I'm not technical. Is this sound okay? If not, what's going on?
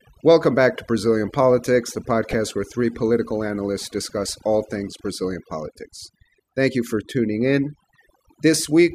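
No. Overdone noise removal runs through the whole clip. A noise reduction tool was set far too strong. Whenever a frequency band fell close to what the tool judged to be background noise, it turned that band almost off, and the softer parts of the speech went with it. The background becomes near silence with small twinkling specks.

DAB burbling appears briefly, from 2.31 to 2.34 s. Digital radio reception was weak enough that a few errors got past its error correction and into the audio data. Those corrupted values put short blips of noise into individual frequency bands, which fits a handful of damaged audio frames. The result is a quick burble over the speech.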